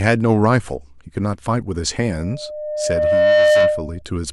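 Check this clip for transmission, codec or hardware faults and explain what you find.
One hardware fault is present: loudspeaker feedback squeal. From 2.12 to 4.02 s a steady 605 Hz tone swells over about a second and a half to roughly 10 dB above the speech, because a microphone is picking up its own loudspeaker and that frequency keeps reinforcing itself around the loop.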